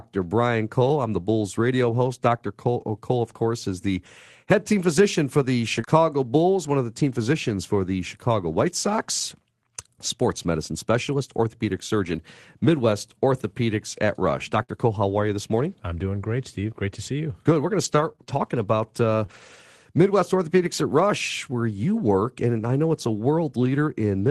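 Speech, carried over a call link whose sound tops out near 12 kHz, which fits Opus at a low bitrate. At 5.77 s there is a lost packet rebuilt from error correction. One 20 ms packet went missing. The decoder played a low-bitrate copy carried in the next packet. So there is no gap, just a brief rougher, noisier patch. Right after come two short concealed packet losses, at 5.81 to 5.85 s and 5.85 to 5.89 s. Each lost 20 ms. The receiver extended the preceding sound to fill each hole, then blended back. The result is a quick smear or wobble. A burst of packet loss hits at 14.63 to 14.70 s. About 60 ms never arrived in time. The last sound was held and faded, giving a short buzz or hiss. The audio then picks up further on, with that slice gone. From 17.84 to 19.60 s there are scattered short gaps. Roughly four separate packets dropped, the longest about 30 ms. Each was patched by continuing the prior sound. 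Brief ticks and hiccups result, and some stretches sound rougher.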